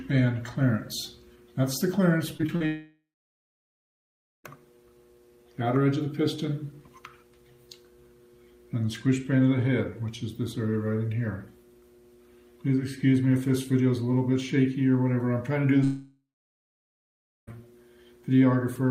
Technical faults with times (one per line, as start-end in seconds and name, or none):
2.37-2.62 repeated packet loss (robotic sound)
2.66-4.46 long network dropout
15.84-17.53 long network dropout